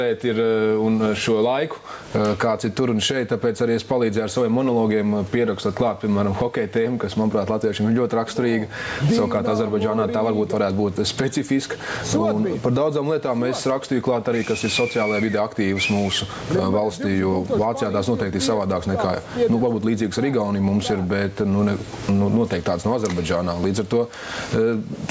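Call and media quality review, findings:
Gain pumping throughout: swing around 15 dB, dynamics squashed. Likely mic gain set far too high, with a fast limiter or compressor clamping each peak. Call-path band-limit at 8 kHz noted, not a fault.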